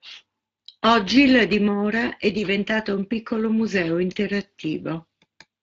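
Speex codec damage runs through the whole clip. The speech sounds hoarse and grainy. The CELP coder has too few bits to model the excitation cleanly. The damage is plainly audible and fits a middling setting near 20 kbps.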